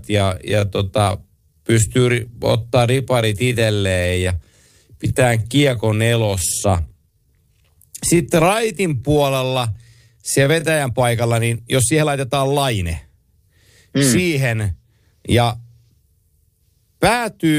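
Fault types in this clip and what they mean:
Time-stretched section: From 0.0 to 10.74 s, the speech runs at 0.69 times normal pace. Pitch stays unchanged. It sounds dragging. Software likely lengthened it by repeating short pieces. At 10.74 s the pace jumps back abruptly.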